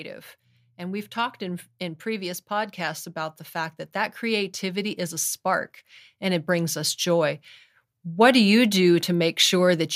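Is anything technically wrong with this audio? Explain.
Yes. From 0.78 s to 7.46 s there is automatic gain rising: the gain control judged the input too quiet and kept raising its gain, by about 11 dB in total. The speech and the background noise swell together steadily over those several seconds.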